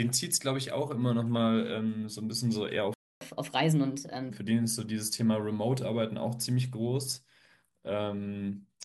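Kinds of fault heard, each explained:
Playback stall: at 2.94 s the speech cuts out and silence holds for about 0.27 s, until 3.21 s, before the sound resumes. The output has nothing to play for that stretch, likely because the player's supply of data ran dry or its playback thread was held up, so the flow of speech simply halts mid-stream and then picks up again once audio reaches the output.
Catch-up at higher speed: from 3.21 s to 4.30 s, right after the gap, the speech runs at 1.25 times normal speed, and because it is sped up by resampling rather than time-stretching, the pitch rises with it, by roughly four semitones. The player is racing through the audio that piled up during the stall to recover the lost time, then settles back to normal speed and pitch at 4.30 s.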